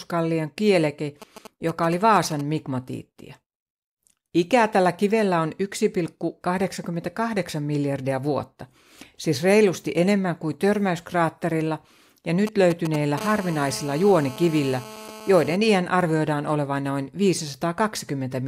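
From 1.22 to 2.41 s there's a burst of GSM signalling interference: a galloping dit-dit-dit of short buzzes at about 217 Hz, sitting roughly 15 dB under the speech. A 2G handset close by is firing off short groups of radio bursts while it negotiates with the network, and something in the audio chain is rectifying that RF into audible pulses. It comes back from 12.47 to 13.20 s, right after "enemmän kuin törmäyskraatterilla ja", and it's louder this time, around 10 dB below the speech.

At 13.21 s it turns straight into steady GSM phone buzz that lasts until 15.56 s, just before "iän arvioidaan olevan noin". The phone has moved from signalling into a call, so it now transmits continuously in bursts 217 times a second. The rectified pulse train comes through as a hard, raspy 217 Hz buzz full of harmonics, about 16 dB below the speech and with no relation to what's being said.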